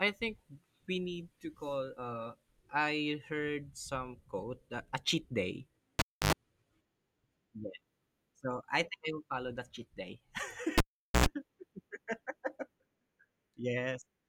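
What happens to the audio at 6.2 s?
A live cable is pulled and plugged in again from 5.99 to 6.33 s, right after "that a cheat day". A pop opens 0.29 s of near silence, ending in 0.09 s of 50 Hz mains buzz while only the tip touches, then a second pop as the sound returns.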